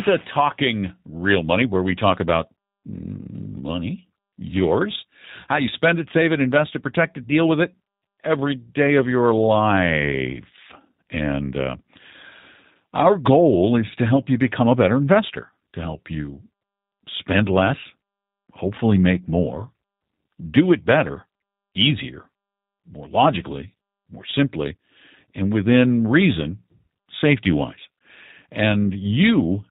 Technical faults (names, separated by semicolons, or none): G.729 codec